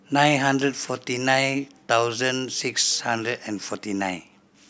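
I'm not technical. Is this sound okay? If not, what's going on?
Yes, it sounds fine.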